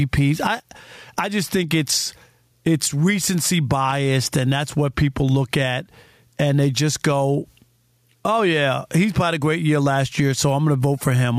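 Gain pumping runs through the whole recording. The level rises and falls by around 10 dB as the speech comes and goes. The likely cause is input gain set far too high, with a fast limiter or compressor clamping down on each peak and releasing in the gaps. Loud and quiet passages sit close together, and the result sounds squashed and breathing.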